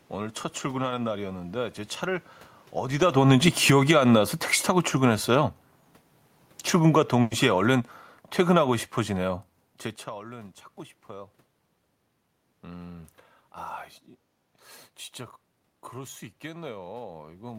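From 3.06 to 5.69 s, automatic gain falling pulls the level down by about 6 dB. The background room noise sinks with the speech, which sets it apart from the talker moving near 3 s. The gain falls again by about 5 dB from 6.76 to 9.45 s.

Within that second fall, a burst of packet loss runs from 7.21 to 7.34 s. The receiver stretches the last sound for about 100 ms as a fading buzz or hiss rather than silence. It then resumes with roughly 60 ms of speech skipped.

From 7.56 to 7.81 s, a jitter buffer speed-up trims short pitch-period pieces, around 40 ms in total. This runs the speech at 111% speed, hurried but at unchanged pitch, unlike a resampling error.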